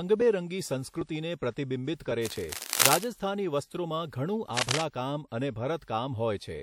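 From 2.24 to 3.08 s and again from 4.55 to 4.84 s, uneven scratching bursts roughly as loud as the speech cut across it. This cable scratch noise likely comes from a worn cable or connector being moved, shifting contact resistance. Within the first burst, from 2.70 to 2.73 s, a brief hiss runs ahead of a sharp attack and softens it. This is pre-echo, where a transform codec spread its block's quantisation noise into the quiet 32 ms before the onset.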